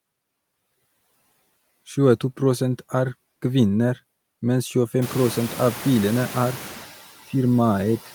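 From start to finish the background noise pumps with the speech, sinking in the gaps and swelling back underneath as talking resumes. These are noise suppressor artifacts: the suppressor judges which frequency bands hold steady noise and lowers them frame by frame, cutting by about 11 dB. The room noise, which jumps by about 24 dB around 5 s to sit roughly 15 dB under the speech, is part of the recording itself.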